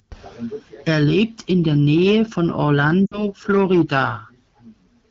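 At 3.06 s the speech smears and fades out. These are lost AMR speech frames. Radio errors corrupted them. The decoder repeated the last good pitch and vocal tract shape with falling gain. The gap of about 60 ms fits three 20 ms frames. It ends at 3.24 s.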